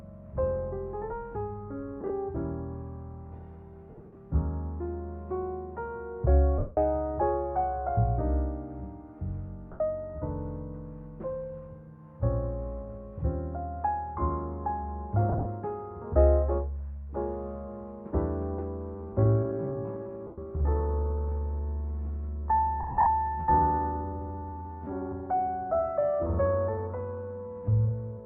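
Lost LE Audio frames occur at 2.01–2.10, 3.90–4.16, 6.58–6.77, 9.72–9.80 and 15.29–15.46 s. The decoder fills each gap by repeating the last spectrum with scrambled phase, so tones smear into brief noisy bursts that fade during the longer runs.

From 18.91 s to the end, the pace drops to about 0.69 times normal with pitch unchanged, so the audio drags: a likely time-stretched section. The same frame-loss smearing recurs inside it at 20.27–20.38 and 22.80–23.06 s.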